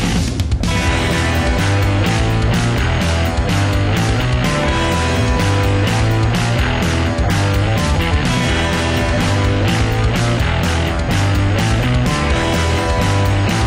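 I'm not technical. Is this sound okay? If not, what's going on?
No, it sounds dull and gurgly all the way through, which is most likely MP2 compression squeezing it too hard and dropping the top end, like weak digital radio.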